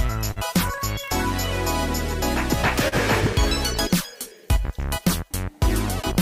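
Clock drift between sender and receiver runs through the whole clip. The sending side's clock is about 2 percent slower than the receiving side's, so the jitter buffer keeps draining and the receiver pads the stream by repeating short slices of audio. This is heard as small timing hiccups at uneven intervals from start to finish, brief stutters where a fragment of sound is doubled rather than a clean, steady flow.

A short stall from a late packet occurs at 0.31 to 0.39 s. A packet arrived after it was due, the buffer ran empty, and the receiver held the last sound for about 47 ms before resuming from the same point. No audio is lost, but that moment is sustained unnaturally, with a faint buzzy or dipped quality. The same stall recurs at 2.88 to 2.95 s, this time with about 39 ms held.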